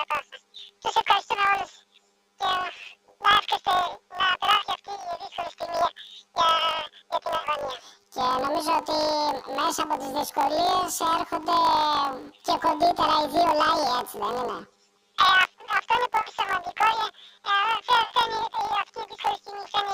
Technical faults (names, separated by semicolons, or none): planar audio read as interleaved